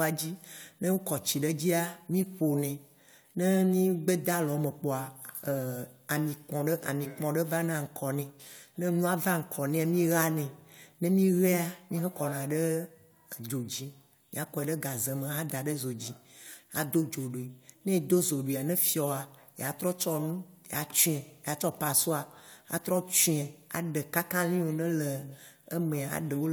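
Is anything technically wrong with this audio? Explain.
No, nothing technically wrong can be heard here.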